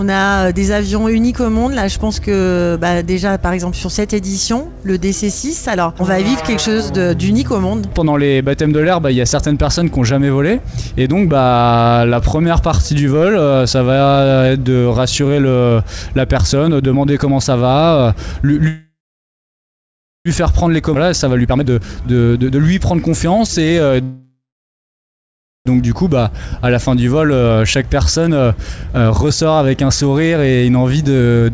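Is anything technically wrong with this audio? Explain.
Yes, there are call-path glitches in the second half, with audio already band-limited to about 8 kHz, which fits a G.722 stream at 64 kbps.

Call audio freeze, 18.68–20.28 s and 24.03–25.69 s: the last sound carries on as a fading buzz, then goes silent for about 1.3 s and 1.24 s. That's likely held-up packets draining the jitter buffer. The audio resumes where it stopped, nothing lost, just a gap inserted.

Skip ahead, 20.94–20.98 s: playback jumps forward with almost no gap, and roughly a second of audio is simply gone. That stretch was dropped, on the way or by an overflowing buffer, while later audio was already waiting, so the two sides butt together.

Jitter buffer speed-up, 21.38–23.93 s at 124% and 28.28–29.42 s at 109%: the receiver trims tiny pitch-period slices over and over to shrink excess delay. It removes roughly 0.7 s and 0.1 s. 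Pitch holds, but the audio sounds rushed, most noticeably in the first stretch.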